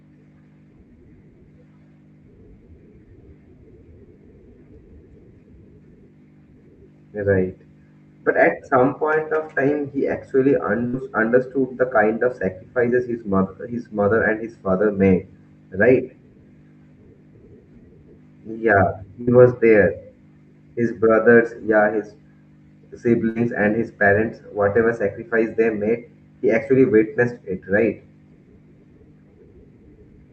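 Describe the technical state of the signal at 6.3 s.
At 6.3 s the speech is intact, with no dropout, glitch or distortion, and what reaches the ear is simply the ordinary sound of the call path.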